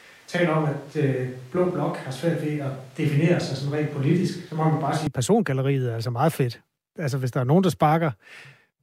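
From the start until 5.07 s the speech sounds roomy and hollow, thin in the bass, with room noise about 30 dB below the voice, then snaps to a close, full sound. That sudden return, with little level change, points to a switch to a distant microphone rather than added reverberation.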